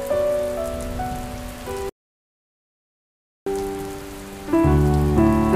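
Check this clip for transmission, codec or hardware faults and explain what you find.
One fault stands out: an audio dropout to silence running from 1.89 s to 3.46 s, so about 1.57 s of material is missing. The sound breaks off mid-flow and returns abruptly, with silence in between and no room tone or noise floor. That points to the input being lost, likely through a disconnected device, a failed link or a mute, while recording continued writing silence. A natural pause would leave faint background sound, and packet-loss concealment would fill the gap with smeared or repeated audio.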